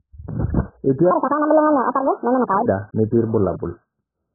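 From start to finish the speech is dull, with nothing above about 1.8 kHz, and carries a warbling, smeared texture. Unlike a simple low-pass filter, the remaining band is patchy and fizzy, which points to likely AAC compression at a very low bitrate, around 8 kbps.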